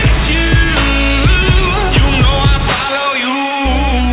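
Aliasing runs through the whole clip. The audio was taken down to a lower sample rate, one that fits 8 kHz, without the filtering that should come first. Everything above the 4 kHz fold point reflects back down as false, unrelated tones, sitting fairly close in level to the real sound. Sharp, bright sounds turn gritty and metallic. Plain band-limiting would just sound dull, but here the spectrum stays full right up to 4 kHz.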